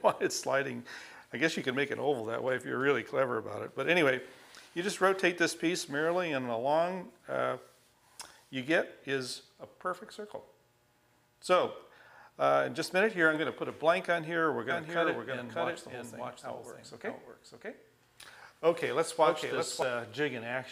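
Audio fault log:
14.70–19.82 s: doubled audio track. A full-band copy trails the original by around 0.7 s, roughly 5 dB quieter, likely from a slower second capture path or an edit holding two offset copies. Spectrograms show every pattern repeated, dry and undecayed; the waveform thickens abruptly at both edges.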